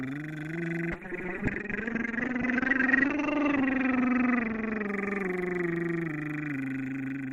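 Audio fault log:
0.92–7.33 s call bitrate drop: the encoder fell from 96 to 7 kbps and the bandwidth from 20 to 8 kHz, leaving the music coarse, watery and muffled.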